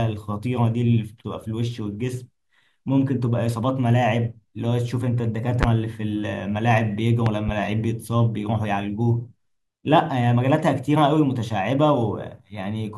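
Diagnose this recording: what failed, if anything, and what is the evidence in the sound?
Three loud pops cut through the speech, which carries on beneath them: a single sharp pop at 5.63 to 5.66 s, about 20 dB above the speech, then a double pop from 7.26 to 7.51 s, about 15 dB up. Likely an analogue wiring fault, with voltage steps from a plug, switch or static.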